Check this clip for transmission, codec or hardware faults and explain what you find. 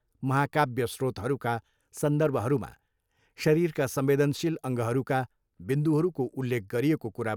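Nothing wrong turns up anywhere in this bit of speech, so there's no fault to walk through.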